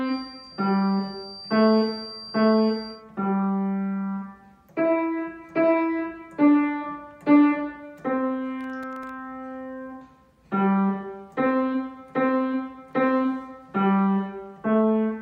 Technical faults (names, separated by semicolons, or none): feedback whistle; processor overload crackle